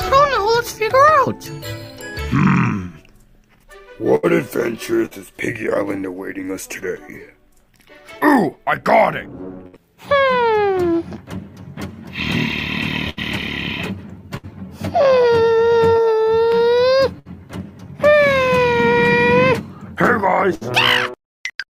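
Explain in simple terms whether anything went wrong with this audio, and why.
Four times the sound briefly freezes into a held buzz or fading hiss, then jumps ahead: at 4.15 to 4.26 s, 5.06 to 5.14 s, 9.67 to 9.78 s and 20.55 to 20.64 s. Each is a burst of packet loss. A run of data went missing, the player stretched the last sound to cover it, and about 60 ms of audio was skipped.

Between 13.1 and 17.3 s there are roughly three small hiccups or smears, the longest around 70 ms. These are scattered short gaps. Single pieces of data arrived too late or not at all, and each hole was patched by briefly continuing the sound before it.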